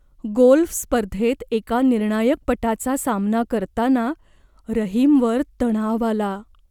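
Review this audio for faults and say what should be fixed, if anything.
Nothing in this speech recording stood out on listening, so there is nothing to fix.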